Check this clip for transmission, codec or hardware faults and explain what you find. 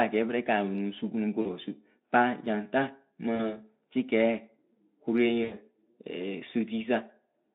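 There is one recurring fault, VoIP packet loss concealed by the speech codec, heard three times in the speech: 1.41 to 1.49 s, 3.35 to 3.55 s, and 5.43 to 5.54 s. Each time the speech smears into a brief buzzy tone or coloured noise that fades and stays weak or distorted for a moment afterwards. Packets went missing, about 40 ms in the first two events and 80 ms in the third. The narrowband Speex decoder, carrying 200 Hz to 3.6 kHz, filled each gap by extrapolating its last pitch and filter at falling gain, and the damage lingers because each frame is rebuilt from the one before.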